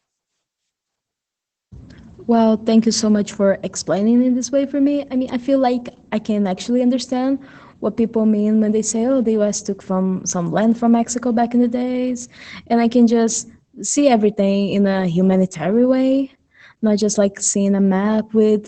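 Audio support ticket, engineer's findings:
Opus voice compression, whole clip. Speech sounds muffled, slightly hoarse and a bit robotic, and the damage is plainly audible. Nothing above 8.9 kHz. The encoder is running SILK at wideband, with coarse excitation coding from the low bitrate. It sounds like roughly 12 kbps at 20 ms frames. Probable component is the encoder bitrate setting, so check the send-side config first.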